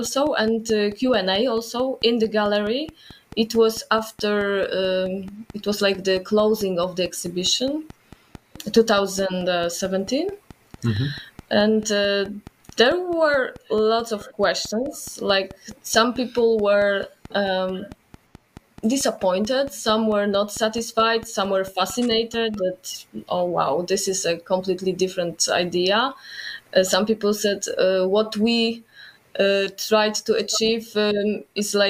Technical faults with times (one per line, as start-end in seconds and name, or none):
0.06-22.55 train of clicks